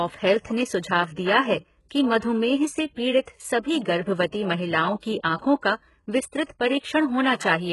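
HE-AAC compression runs throughout: the treble sounds synthetic, gritty and lispy, with nothing above 11.5 kHz, likely from spectral band replication at a very low bitrate near 12 kbps. Pre-echo follows at 3.21 to 3.27 s, just after "कि मधुमेह से": block-spread quantisation noise puts about 59 ms of hiss before an attack and softens it.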